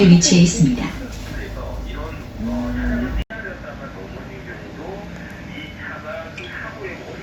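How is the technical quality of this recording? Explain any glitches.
One fault affects the second half of the recording. At 3.22 s, after an 80 ms gap, the sound drops roughly 5 dB, loses everything above 13 kHz, and gains a new noise floor about 55 dB down, likely from the input switching to a poorer device.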